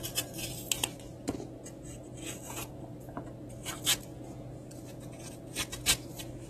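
From start to finish the audio sounds dull and smeared, with nothing above about 13.8 kHz and a warbly, fizzy texture in the sustained parts. That's likely AAC compression: the encoder lowered its cut-off and coarsely quantised the spectrum, which fits a low bitrate around 24 kbps.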